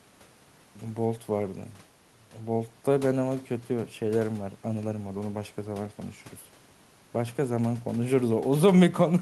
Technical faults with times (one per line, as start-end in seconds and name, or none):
none